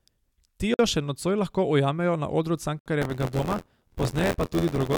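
At 0.74 s, just before "še nocoj lahko ujamejo", the speech drops out for about 51 ms. It happens again at 2.79 s, right after "lahko ujamejo na odru", for about 67 ms. This is a gap at a join of encoded pieces, spaced 2.0 s apart. Each piece was encoded on its own and joined untrimmed. The encoder's start delay and end padding remain as silence. The codec smears the edges, then the speech resumes where it stopped.

From 3.01 s to the end, buffer tearing sets in. A robotic buzz at 86.1 Hz rides on the speech, which fits a 512-sample buffer. Writer and reader have slipped. Roughly a sixth of each buffer replays audio from about 20 ms earlier, with hard joins on both sides.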